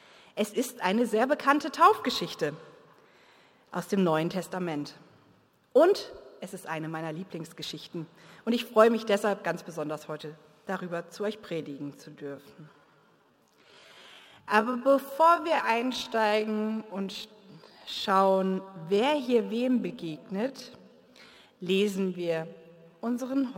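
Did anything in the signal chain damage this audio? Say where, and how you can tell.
Yes. From 11.48 s to the end at 23.57 s the pace abruptly slows to about 0.65 times normal while pitch holds steady, so the audio drags. This is a time-stretched section, likely from software padding the length by repeating short pieces. A sample-rate mismatch would drop the pitch too.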